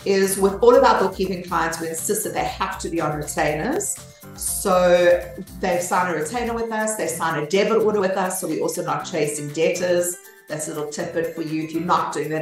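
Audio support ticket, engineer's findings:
Short skips at 1.27, 3.76, 6.26, 8.75 and 11.24 s, one every 2.5 s, each losing a few milliseconds. Likely audio missing between chunks at recorder buffer boundaries. Waveform shows abrupt splices, spectrogram thin vertical lines.

Jump at 7.99 s, roughly 50 ms skipped, consistent with two 26.1 ms frames. Compressed frames skipped in decode. Spectrogram shows a discontinuity at the join, waveform a splice.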